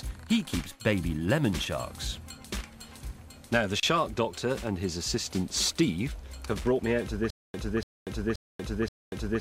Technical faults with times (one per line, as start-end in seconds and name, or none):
7.30-9.40 stutter with silent gaps